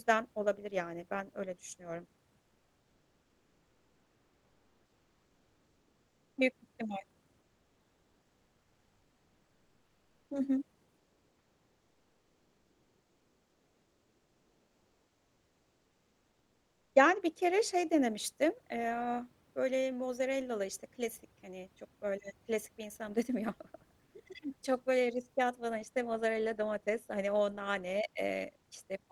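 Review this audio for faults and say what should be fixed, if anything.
Comfort noise in place of the background appears from 7.40 to 10.30 s and from 10.98 to 16.95 s. The real background gives way to steady, featureless hiss, about 2 dB quieter. The likely cause is discontinuous transmission, with the receiver synthesising noise during pauses. Disabling DTX in the Opus encoder would prevent it.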